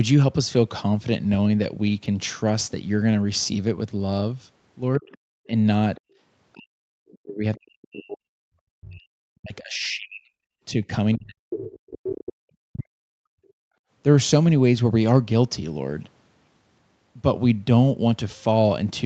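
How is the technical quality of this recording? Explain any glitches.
The recording has clear echo-canceller trouble, spread across most of its middle section.

Speech suppressed in double talk, from 4.98 to 13.4 s: with both ends of the call talking at once, the echo canceller likely could not tell the local talker apart from the loudspeaker echo and pulled everything down together. Across roughly five seconds of that span the speech sinks, thins out and breaks into pieces, dropping by about 40 dB at its deepest before recovering around 13.4 s.

The other side's voice leaking through appears four times: at 5.11 to 5.17 s, 5.95 to 6.0 s, 11.5 to 12.19 s, and 13.5 s. The far-end voice, played over the local loudspeaker, was likely not fully removed from the microphone signal. The first two and last are brief scraps, about 30 dB and about 40 dB below the speech, while the stretch from 11.5 s is far more obvious, only about 10 dB under it.

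Background gated by the echo canceller, from 13.68 to 13.88 s: while the loudspeaker was active the canceller clamped the microphone hard, so the room sound falls away by about 30 dB for roughly 0.2 s and then returns as the canceller releases. It is a short hole in the ambience, just after the last echo fragment.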